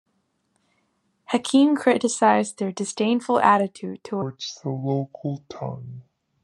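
At 4.22 s the speech drops into a section at the wrong speed and stays there to the end of the clip. Playback runs at about 0.69 times the original rate, so pitch and pace fall together, roughly seven semitones down, and everything turns deep, slow and a bit sluggish. It's likely a clock mismatch, with that stretch played back or resampled against the wrong rate, rather than anything done at the microphone.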